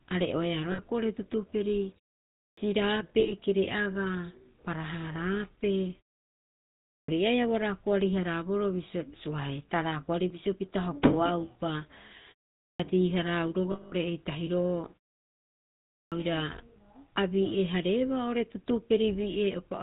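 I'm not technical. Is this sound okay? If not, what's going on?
No, it isn't quite okay. The whole recording went through the GSM full-rate codec, the old mobile-phone speech compressor. It keeps only a rough model of the voice and drops everything above 4 kHz, so the speech sounds buzzy, gravelly and muffled all the way through.

There are also lost GSM frames at 0.72, 3.2 and 13.7 seconds. When pieces of the signal went missing, the phone filled each gap by repeating the last good piece. You hear that as a short metallic, ringing smear. The one at 13.7 seconds lasts about a fifth of a second.

The last problem is a clipped start after a pause, at 2.4, 6.93, 12.64 and 15.96 seconds. After a pause, the playback device seems to wake up late, so the first sixth of a second or so is lost. Each time, the speech jumps in abruptly, missing its opening sound.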